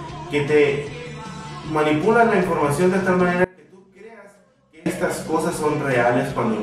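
An audio dropout to a faint residue runs from 3.44 to 4.86 s. The sound cuts abruptly for about 1.4 s, leaving only a faint leak well below normal level. The likely cause is a signal interruption upstream while the path after the break stayed live.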